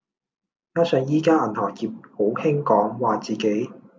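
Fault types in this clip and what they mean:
No faults can be heard in this speech recording.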